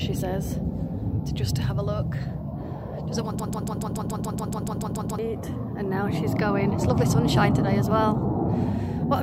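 The audio falls into a broken-record loop from 3.40 s to 5.19 s. A fragment about 142 ms long repeats exactly, back to back, 13 times. It produces a fast stutter with no change between cycles. Whatever should have played in those 1.8 seconds is gone. The likely cause is a stall in the player, encoder or stream. During the stall, it kept sending the last short piece it held.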